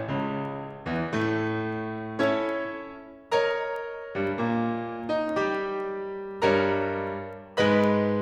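A digital link is being read by a receiver running on its own clock, not locked to the sender's, with the two clocks drifting apart by something on the order of 100 ppm. Each time they slide past each other, a sample is dropped or repeated. In this music, that produces word clock ticks from 0.20 s to 8.09 s: sharp clicks of uneven strength recurring steadily about every third of a second, around thirty in all.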